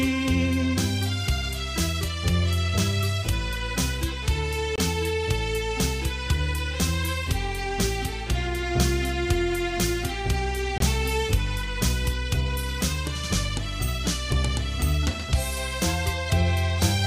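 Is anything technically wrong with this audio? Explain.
Yes. There is a gap between chunks at 4.76–4.78 s and again at 10.78–10.80 s. Each is a hole of about 23 ms, and the two are spaced six seconds apart, which fits audio delivered in 6-second chunks with silence inserted at each join. No sound is missing, but the flow stops abruptly and restarts, heard as a brief hard-edged dropout. On a waveform each appears as a flat line with sharp edges; on a spectrogram, a thin vertical blank stripe across all frequencies.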